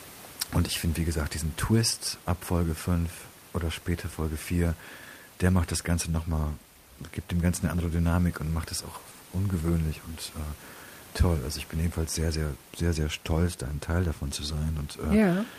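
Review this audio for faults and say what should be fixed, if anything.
Nothing here needs fixing: the speech comes through without any system trouble, and the faint room sound sitting about 27 dB beneath it is just part of the space where it was recorded.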